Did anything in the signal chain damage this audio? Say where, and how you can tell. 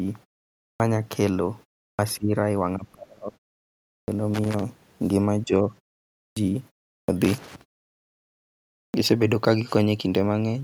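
Yes, in three places.

Clipped start after a pause, at the playback stage: speech jumps in abruptly at 0.73, 1.92, 4.01, 6.29, 7.02 and 8.87 s, each time missing its first 64 to 75 ms after a gap of 0.35 to 1.3 s. The output device dozes off in silence and wakes late.

Speech suppressed in double talk, in call processing: the talker dips by about 20 dB at 2.17 to 2.34 s, about 30 dB at 2.76 to 3.41 s, and about 10 dB at 5.44 to 5.72 s. That's likely an echo canceller that couldn't tell near speech from far-end echo and ducked everything.

Loose connector crackle, in the analogue wiring: irregular scratchy bursts run from 4.34 to 4.63 s and from 7.24 to 7.61 s. A dirty or worn contact is making and breaking, chopping the signal.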